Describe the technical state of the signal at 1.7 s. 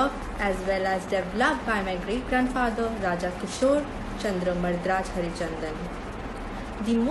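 At 1.7 s the signal sits near the end of a train of clicks running from 0.07 to 1.82 s: around fifteen near-identical pulses at a steady 6.9 per second, peaking roughly 10 dB above the sound and ticking through pauses as well. The likely cause is interference or a faulty connection or power supply injecting the same pulse repeatedly. The even spacing and matching shape separate it from random crackle or an isolated dropout click.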